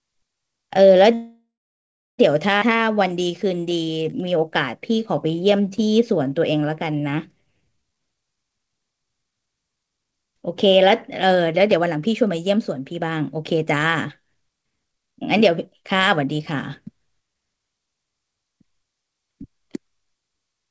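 At 1.14 s the audio stops and a fading buzz fills about 1.05 s, with the last 0.7 s silent, until 2.20 s. This call audio freeze likely comes from held-up packets draining the jitter buffer. A skip ahead at 2.60 to 2.63 s then jumps forward, dropping roughly 0.7 s of audio to recover the added delay. Two jitter buffer slow-downs follow, from 2.70 to 4.41 s at 88% speed and from 4.91 to 8.07 s at 89%. Repeated pitch periods stretch the sound at unchanged pitch. From 8.14 to 17.87 s a jitter buffer speed-up runs at 110%, trimming roughly a second of audio so the sound seems hurried. Throughout, content stops at 8 kHz, consistent with the G.722 call codec path.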